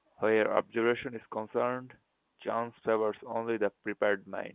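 No technical faults can be heard anywhere in the speech. It comes over a working G.711 telephone path, audible as a band that stops at 4 kHz with a faint, level-following noise beneath it, which fits A-law coding at 8,000 samples a second.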